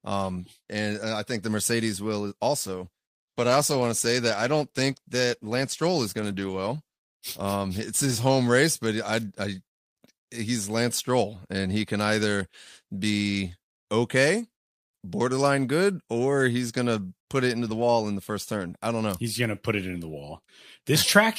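Speech, with a call bitrate drop from 2.61 to 8.57 s. The audio turns coarse and muffled as the encoder starves, which fits a fall from around 64 to 21 kbps.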